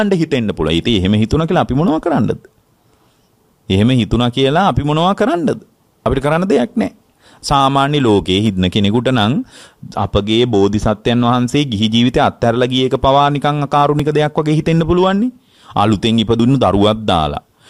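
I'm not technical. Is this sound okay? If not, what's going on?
No. There are three small skips, at 6.06, 14.0 and 16.4 seconds. Each is a spot where the sound jumps ahead slightly, missing a sliver of about a hundredth to a fiftieth of a second. This is likely a dropped buffer (overrun), where the recording software briefly fell behind and lost that slice.

At 8.46 seconds there's a sharp snap layered on top of the sound. This is likely an electrical switching spike, a tiny burst from a nearby switch, motor or static discharge that the audio cable picked up.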